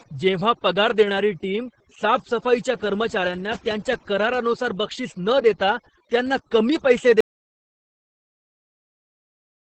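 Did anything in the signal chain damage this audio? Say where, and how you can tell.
Yes. At the call-processing stage, overdone noise removal runs throughout: the suppressor pulls individual frequency bands down whenever they sit near its noise estimate, so the background collapses to near silence with twinkling specks and the speech loses its quieter detail.

At the codec stage, Opus voice compression in SILK mode at 10 kbps with 20 ms frames caps the band near 8.6 kHz and quantises the excitation coarsely. The damage is heavy: the speech comes out muffled, hoarse and faintly robotic across the whole clip.

From 7.21 s to the end the signal drops out to silence, right after "देता त्यांना कमी पैसे". The gap is silent with no room tone, which points to a lost input, likely a disconnected device or failed link with the recorder still writing.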